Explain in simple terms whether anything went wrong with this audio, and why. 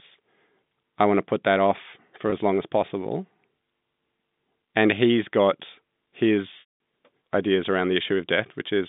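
Two dropouts come from packet loss with pitch repetition. At 2.30–2.32 s, one piece of sound, about 20 ms, goes missing and sounds briefly held. At 6.60–6.78 s, a longer gap (likely ten lost packets) fades into silence before the speech returns with a short cross-fade.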